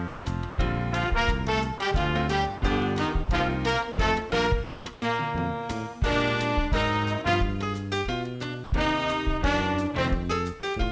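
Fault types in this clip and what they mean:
Sound chopped by the voice detector: The detector likely toggled sending on and off, so at 0.08–0.58, 3.92–5.02 and 8.36–8.72 s real sound alternates with comfort noise.
Sound dropped by the voice detector: Brief stretches were likely judged background and not sent. Comfort noise replaces 20 ms at 1.78 s, and 40 ms at 2.58 and 3.24 s.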